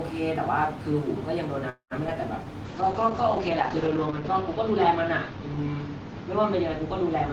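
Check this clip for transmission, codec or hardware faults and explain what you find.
Three transmission faults are audible, all in the first half of the clip or continuing from there to its end.

From 1.69 to 1.93 s there is a call audio freeze. The last sound is stretched into a fading buzz and about 0.11 s of silence. The likely cause is held-up packets draining the jitter buffer. Nothing is lost, and the audio resumes exactly where it stopped.

From 2.07 to 2.09 s, short concealed packet loss briefly smears the sound. About 20 ms never arrived and was patched over. Unlike the freeze, material is genuinely missing rather than delayed.

From 2.66 s to the end there is a call bitrate drop from 32 to 8 kbps. Bandwidth falls from 20 kHz to 8 kHz, so the sound turns muffled, watery and coarse rather than simply filtered.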